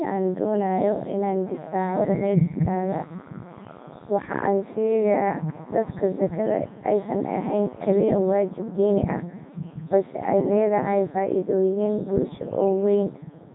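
Throughout the speech, a Codec 2 vocoder has replaced the original waveform with sine-wave resynthesis driven only by pitch, voicing, energy and a spectral envelope. Damage is heavy: robotic, buzzy tone, nothing above 3.8 kHz, consistent with its 3.2 kbit/s mode.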